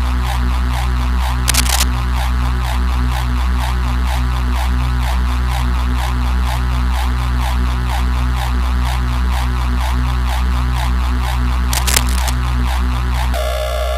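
A burst of scratchy, rustling noise sits over the sound from 1.48 to 1.84 s, about as loud as the sound itself, and returns about 5 dB quieter from 11.73 to 12.34 s. This cable scratch noise likely comes from a worn connector or cable shifting, its contact resistance jumping erratically.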